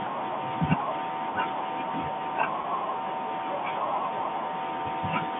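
At 2.62 to 2.64 s the speech briefly catches, with a momentary held, slightly buzzy quality instead of a clean continuation, and then moves on. This is packet loss with pitch repetition. About 20 ms of audio went missing, consistent with a single lost packet, and the receiver filled the gap by repeating the most recent pitch period, so the sound holds on one cycle rather than dropping out. Around it, the G.711 telephone coding carries the narrow 150 Hz to 3.5 kHz line band.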